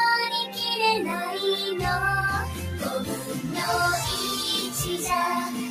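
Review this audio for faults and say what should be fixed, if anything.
Noise suppressor applied to music or sounds, throughout: a speech-tuned suppressor is treating sustained tones, ambience and reverb as noise. Onsets pass, but held parts and decaying tails get pulled down by roughly 5 dB, so the sound pumps and thins. Bypass speech noise suppression whenever the source is music or general sound rather than voice.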